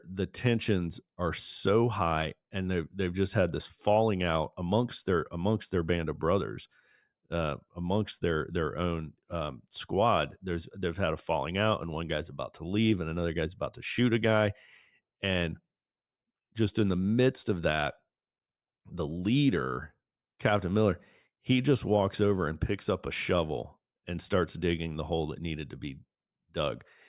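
Listening to this speech recording, nothing technical stood out as wrong.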